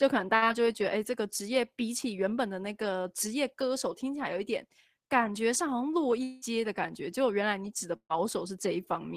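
At 0.35 to 0.46 s a burst of packet loss hits the speech. The receiver stretches the last sound into about 63 ms of fading buzz or hiss, and when the signal resumes roughly 40 ms of the original is gone. The playout delay also grows by about 23 ms. A second burst at 7.96 to 8.17 s is longer: about 132 ms of concealment replaces 120 ms of lost audio, and it fades to roughly 80 ms of silence before the speech returns.

From 2.04 to 2.38 s, a jitter buffer speed-up plays the speech at about 109% of its normal rate. The receiver cuts many short pitch-period slices, around 40 ms in total, to drain excess buffered delay. The pitch stays the same and the passage simply sounds hurried. Nothing drops out and there is no buzz or hiss, which separates it from packet loss.

From 6.23 to 6.45 s a long stretch of speech vanishes. A held, fading buzz or hiss fills about 184 ms, and roughly 160 ms of the original never returns. 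This is likely a long network dropout. Here the concealment carries through the whole gap without ever reaching silence, and the delay shifts by about 20 ms afterwards. The gap lasts longer than the first burst and is covered differently from the second, which fell to silence.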